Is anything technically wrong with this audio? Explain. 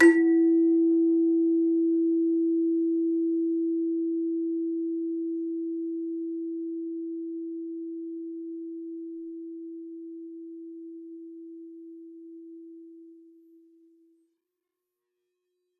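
No, nothing technically wrong can be heard in this music clip. There are no audible faults anywhere in it.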